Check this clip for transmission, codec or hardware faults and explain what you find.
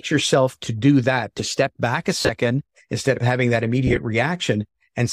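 Two bursts of lost LE Audio frames interrupt the speech. The first runs from 2.21 to 2.29 s, just after "to step back a". About 70 ms is missing across 80 ms, with the longest run around 40 ms. The second runs from 3.87 to 3.97 s, after "instead of having that". There 50 ms is missing across 100 ms, in short runs.

In each gap the decoder repeats the last spectrum with randomised signs. The voice smears into a brief hiss instead of falling into silence, and that is what separates this from a plain dropout. The steady light grain under the speech is likely LC3 compression at a setting that fits 10 ms frames, and it doesn't bunch up at these moments.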